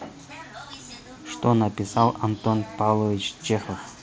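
The speech carries no technical faults, arriving over a Bluetooth mSBC headset link at 61 kbps that passes the band up to 8 kHz, with only the light grain that this codec lends to louder moments.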